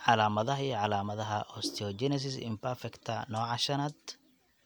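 No technical faults can be heard anywhere here.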